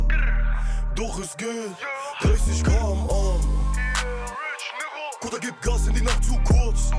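No technical faults are audible.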